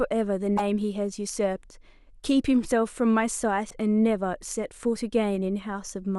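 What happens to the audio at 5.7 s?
At 5.7 s the speech carries on without interruption, and nothing at that moment breaks from the sound around it.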